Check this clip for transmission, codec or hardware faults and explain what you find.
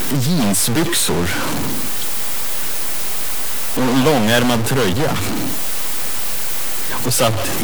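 One hardware fault runs through the whole clip. Throughout, the speech carries harsh, buzzy distortion and noisy pauses, likely from a stuck bit offsetting samples by roughly -15 dBFS.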